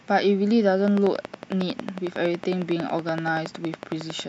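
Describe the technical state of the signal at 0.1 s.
At 0.1 s the speech signal is intact, with no audible fault at that moment.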